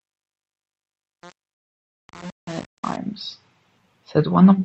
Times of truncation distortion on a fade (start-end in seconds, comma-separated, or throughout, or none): 0.00-2.97